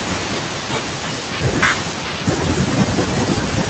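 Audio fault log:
throughout, noise suppressor artifacts: the room noise, which sits about 19 dB below the speech, is pushed down frame by frame between phrases and comes back under them. Unlike a steady noise gate, the residue changes texture band by band rather than simply switching on and off.
0.00–3.69 s, speech cut by the noise suppressor: along with the background, the suppressor also pulls down parts of the speech it mistakes for noise. The deepest drop is about 12 dB. Soft consonants and word endings sound swallowed and faint rather than clipped. This separates it from packet loss, which leaves hard gaps instead.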